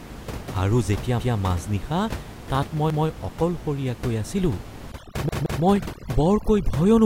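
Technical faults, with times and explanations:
1.20–1.37 s, 2.90–3.07 s and 5.29–5.63 s, repeated buffer: a 171 ms chunk replays with a hard join, once, once, then twice, giving stutters that fit an 8192-sample buffer arriving late.
4.92–7.06 s, overdone noise removal: aggressive suppression gates bands near the noise estimate, so the room noise (about 14 dB below speech) turns to twinkling near-silence and quiet parts of the voice go with it.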